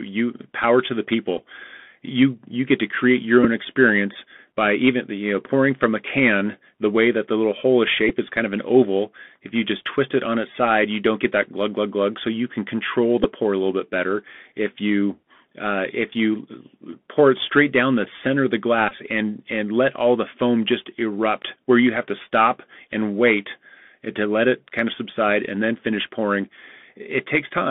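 The link runs through the Bluetooth CVSD headset codec for the whole speech clip. This delta-modulation scheme sends one bit per sample, stepping the waveform up or down with an adaptive step, which fits a 64 kbps headset link. The line passes only about 150 Hz to 3.4 kHz, so the speech sounds boxed and telephone-thin. The codec damage is plainly audible as a grainy hiss beneath the speech and roughness where fast, bright sounds outrun the step size.

Five times, the Bluetooth headset packet was repeated: voice packets between headset and phone went missing, and the decoder played the previous packet's bits again in their place. The first comes at 1.37 s, replacing 11.2 ms, which fits three lost packets. It is followed by 3.44 to 3.46 s (11.2 ms), 8.09 s (7.5 ms), 13.24 to 13.26 s (7.5 ms), and 18.89 to 18.93 s (22.5 ms, pointing to six packets). The last is long enough to form a short buzz at the 3.75 ms repeat rate.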